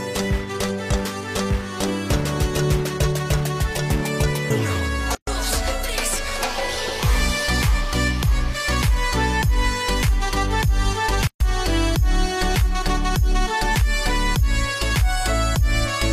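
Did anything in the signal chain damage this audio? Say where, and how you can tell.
Yes, at the codec stage: a gap at a join of encoded pieces. Silences of 124 ms at 5.15 s and 130 ms at 11.27 s, six seconds apart, break the sound with smeared edges. Separately encoded six-second pieces kept their encoder delay and final-frame padding.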